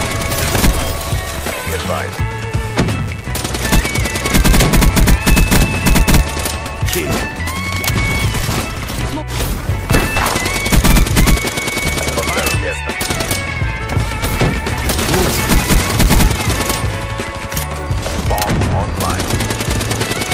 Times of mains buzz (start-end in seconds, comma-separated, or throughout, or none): 0.00-3.62